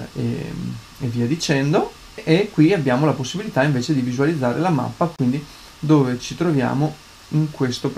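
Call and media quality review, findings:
Repeated frames, 5.16 to 5.19 s. Brief stutter: a 26.1 ms slice of sound plays twice in a row. The block length fits a single compressed frame. Probable component: encoder output or packet path, re-sending a frame. The clip runs 26.1 ms longer as a result.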